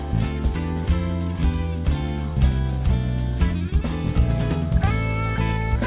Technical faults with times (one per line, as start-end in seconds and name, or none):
none